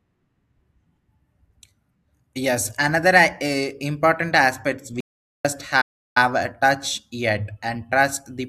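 A speech recording with two silent gaps close together that behave differently. The first is an audio dropout to silence from 5.00 to 5.45 s, right after "eh important aspects". For about 0.44 s the signal falls to silence, with no room tone or noise floor underneath, and the speech that should fill that stretch never returns, so the sentence skips ahead. That combination of dead silence and missing content most likely comes from the input being lost upstream while the recorder kept writing empty samples. The second, from 5.81 to 6.17 s, just before "a touch yet and", is a playback stall. Here the sound halts for roughly 0.35 s and then resumes. The likely cause is the player briefly running out of buffered data or being blocked, then carrying on once it recovered.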